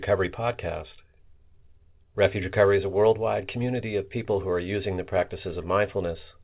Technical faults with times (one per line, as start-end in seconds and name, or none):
none